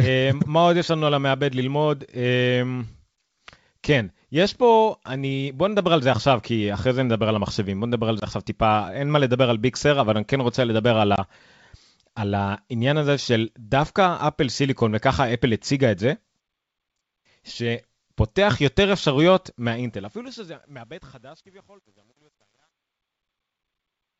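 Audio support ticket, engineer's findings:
Packet loss on the ADPCM call, 8.20 to 8.24 s: hard-edged dropout, 20 ms gone, fits one lost packet. Speech comes back slightly distorted while the decoder's predictor and step size catch up with the sender's.

Same again at 11.16 to 11.19 s: 20 ms hole, about one packet, a short smear of distortion before the adaptive state settles. Both recover within tens of ms.

Truncation distortion on the fade, 19.59 s to end: the gain stage keeps only 10 bits with no dither. Tail turns gritty, worst from 20.7 to 24.2 s, as the level nears the bottom step. The G.722 64 kbit/s wideband path is working normally.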